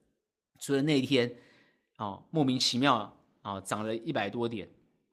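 No technical faults turn up anywhere in this speech recording. There is nothing here to place in time or trace to a cause.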